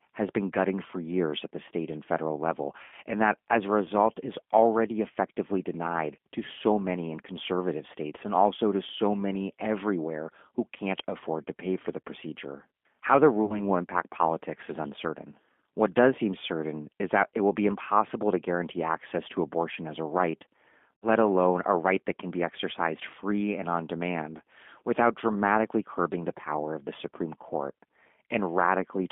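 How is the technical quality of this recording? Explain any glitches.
It's a narrowband call recording with audible damage throughout, plus three short dropouts.

The G.729 codec sits over the whole clip. Everything is squeezed into roughly 200 Hz to 3.5 kHz, and the speech has that rough, slightly synthetic edge of an 8 kbit/s model-based coder rebuilding the voice from filter and pulse parameters.

There's VoIP packet loss concealed by the speech codec at 2.84–2.94 s, 13.45–13.61 s and 20.99–21.06 s, covering about 80, 40 and 60 ms of missing audio. Each time, the decoder stretches the last sound into a fading buzzy tone or coloured noise, and the voice stays weak briefly afterward.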